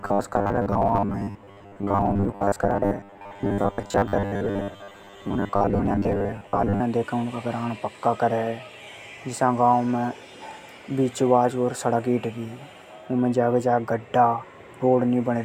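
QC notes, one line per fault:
0.01 to 6.81 s, robotic sound from repeated short buffers: the speech turns into a stiff, metallic buzz pitched at 100 Hz that still roughly tracks the syllables, then clears up for the rest of the clip. What's likely going on is audio arriving late, so the playback keeps looping the last chunk to fill gaps, with about half the material repeats rather than real signal. A 100 Hz buzz points to a loop around 10 ms long.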